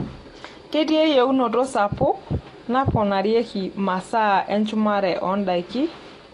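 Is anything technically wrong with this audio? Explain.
Yes. Throughout the speech there is a hard ceiling near 11.6 kHz, with smeared, warbling sibilants, likely AAC compression at a low bitrate around 32 kbps. Starved of bits, the codec discards high frequencies and coarsely quantises the remainder. The warble distinguishes it from a clean low-pass filter.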